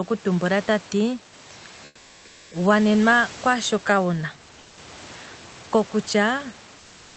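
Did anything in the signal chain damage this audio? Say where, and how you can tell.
Yes. In the call processing and codec stage, the room background is twice replaced by comfort noise, from 1.85 to 2.51 s and from 4.59 to 4.77 s. The real background, already about 27 to 28 dB below the loudest speech, turns into a steady, featureless hiss about 4 dB and about 2 dB quieter. On a spectrogram its fine texture smooths into an even wash below 8 kHz, and the waveform floor sits lower and flatter. The likely cause is Opus discontinuous transmission.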